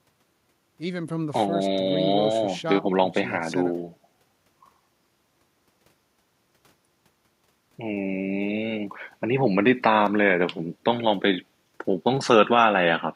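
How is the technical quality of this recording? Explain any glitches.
No audible glitches or faults.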